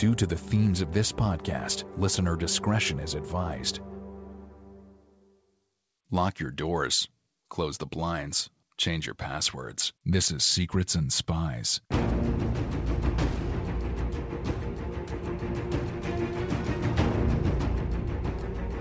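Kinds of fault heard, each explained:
Nothing stood out on listening to this clip, beyond the expected sound of a call path whose G.722 coding leaves nothing above 8 kHz.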